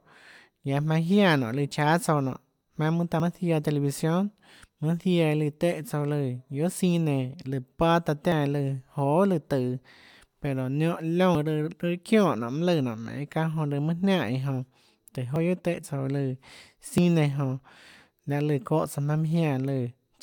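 Dropped buffers (overrun) at 3.2, 8.32, 11.35, 15.36 and 16.98 s: skips where the speech jumps ahead about 40 ms, likely from samples overwritten before being read.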